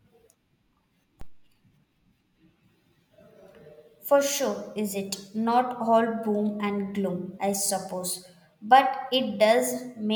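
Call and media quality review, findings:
DC step at 1.21 s: single low thump as the waveform's zero line jumps about -30 dBFS, then decays through a 2 Hz high-pass; speech unaffected.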